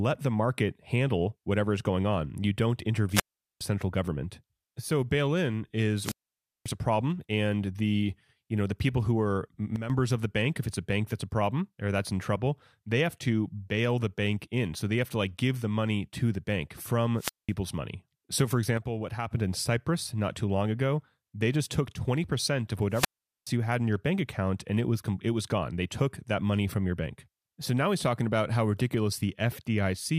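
Speech recorded over a wireless microphone suffers four wireless microphone squelch dropouts: 3.10–3.62 s, 5.97–6.72 s after "bail in" and before "a problem and the", 17.16–17.52 s after "money to the bank" and before "money so for", and 22.90–23.52 s just before "you had in your". In each, hiss swells as the FM signal fades, then the receiver's squelch mutes the output for 0.41 s, 0.54 s, 0.20 s and 0.42 s, and the speech returns. That rising static before the silence distinguishes it from a digital packet dropout, which cuts out abruptly without building noise. There are also two sudden gain jumps, at 9.76 s, where the level falls by about 9 dB over 9.76–9.90 s, and at 18.77 s, where it falls by about 6 dB over 18.77–19.31 s. Speech and background noise drop together in one instant step, likely a digital gain change applied without a ramp. Because the step is instantaneous, it is unlike compressor or AGC pumping, which eases the level down over tens of milliseconds and then recovers.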